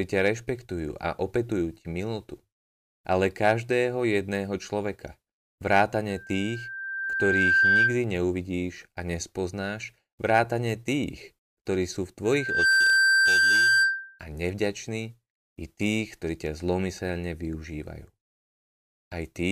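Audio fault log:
6.10–8.03 s and 12.25–14.19 s, loudspeaker feedback squeal: a 1.6 kHz loop tone swells, slowly then quickly, to about 10 dB above the speech; the spectrogram shows a bright horizontal line.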